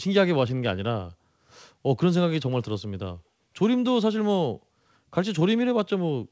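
No technical faults can be heard in this speech, which comes through a call path with nothing above 8 kHz.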